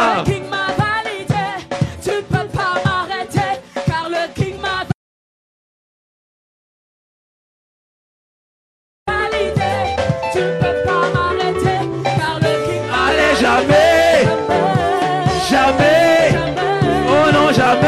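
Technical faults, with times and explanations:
4.92 to 9.07 s, audio dropout to silence: the sound cuts off abruptly and returns mid-flow after about 4.15 s of dead digital silence, with no room tone underneath. This most likely comes from the input being lost while recording continued, writing zeros, so that stretch is gone.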